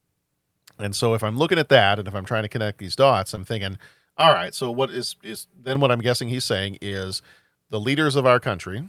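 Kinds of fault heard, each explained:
Short concealed packet loss: brief smears near 3.35 to 3.39 s and 6.89 to 6.93 s, where about 20 ms went missing and the receiver extended the preceding sound.
Channel delay (comb filtering): hollow, phasey speech from 4.21 to 5.75 s, because one channel lags about 5 ms and the mono sum cancels evenly spaced frequencies starting near 100 Hz.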